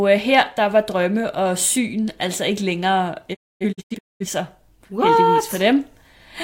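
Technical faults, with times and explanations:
3.33 to 4.26 s, digital broadcast dropout: right after "syn altså ikke længere" the speech drops out in several short holes, about 0.6 s lost across 0.85 s, longest gap 256 ms, each with a quick 20 ms fade, as the receiver muted bad frames until clean ones returned.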